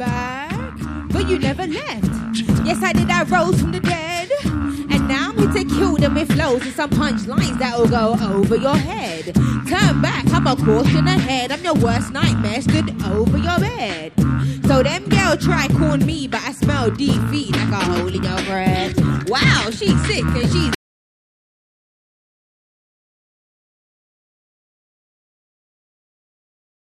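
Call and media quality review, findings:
Audio dropout to silence at 20.75 s, continuing to end of file, about 6.2 s. Sound cuts off mid-flow into silence, no room tone. Likely input loss (device disconnect, link failure or mute) while the encoder kept writing silence.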